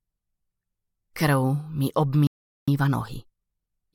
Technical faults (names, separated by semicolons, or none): playback stall; time-compressed catch-up